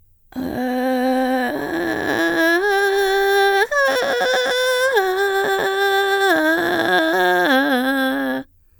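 The music carries through without any audible technical fault at any point.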